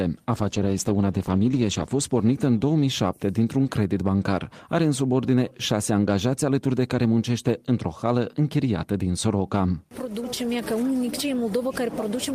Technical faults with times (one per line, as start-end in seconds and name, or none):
0.33-2.93 call bitrate drop